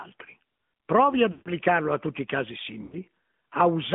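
Speech squeezed through the AMR narrowband mobile codec, so nothing survives above about 3.5 kHz or below 150 Hz, and the voice has that plainly buzzy, synthetic edge, which fits one of the middle AMR-NB modes around 10.2 kbps. You'll also hear lost AMR speech frames at 1.32 to 1.51 s and 2.84 to 3.02 s. There the decoder keeps replaying its last good pitch and vocal-tract settings at falling gain, so the sound smears and sags for roughly 140 ms and 80 ms before the voice picks back up, a bit rough at first.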